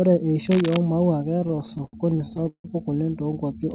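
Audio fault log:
0.45–0.82 s, cable scratch noise: a worn cable or connector being moved likely varied its contact resistance, laying dense, uneven scratching bursts about 10 dB below the speech.
1.4–2.66 s, repeated stalls (stutter): late packets kept emptying the jitter buffer, so the last sound was stretched again and again, up to 164 ms at once, making the speech drag and stutter.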